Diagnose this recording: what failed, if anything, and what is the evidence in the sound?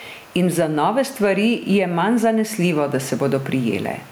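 Gain pumping throughout: the room noise swells between phrases and ducks about 10 dB under loud speech, likely from excessive input gain driving a fast call-processing limiter.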